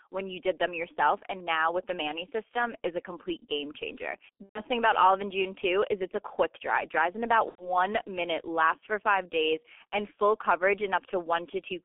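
Right from the start the whole speech clip carries the G.723.1 codec sound: nothing gets through below 250 Hz or above 3.4 kHz, and the slow-moving voice model at what sounds like about 6.3 kbit/s leaves it muffled, hoarse and heavily smeared on consonants.

At 4.43 to 4.62 s there's VoIP packet loss concealed by the speech codec. The decoder keeps guessing from its last pitch and filter, giving a fading stretch of buzz or coloured noise that fits about four lost 30 ms frames. It happens again at 7.49 to 7.71 s, consistent with roughly three frames lost.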